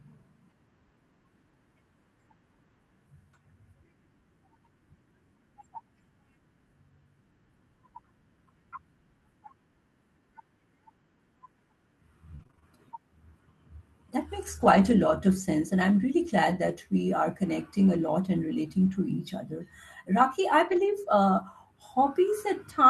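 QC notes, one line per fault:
12.35–20.90 s, scattered short gaps: brief ticks, small smears and momentary hiccups dotted through this stretch, with the sound staying clear between them. About seven separate dropouts, the longest around 40 ms, add up to 140 ms of missing audio. The receiver bridged each hole by stretching the preceding sound forward, so 340 ms in all carries that patched-over, slightly smeared quality, a small fraction of the span, over a call-codec path whose top end stops near 12 kHz.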